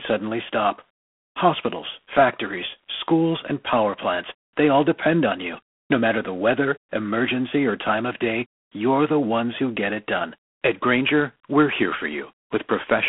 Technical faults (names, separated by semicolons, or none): G.726 ADPCM